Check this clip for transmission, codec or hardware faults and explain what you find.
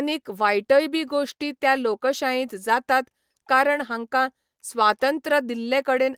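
Nothing in the speech signal points to a transmission, codec or hardware problem; the audio stays continuous and stable throughout.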